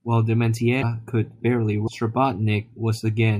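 Speech that skips ahead at 0.81–0.83 s and 1.86–1.89 s, likely from a broken MP3 bit reservoir.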